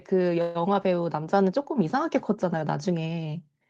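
Call audio freeze at 0.41 to 0.57 s: the last sound stretches into a fading buzz, likely a starved jitter buffer, then speech resumes 135 ms late with nothing lost.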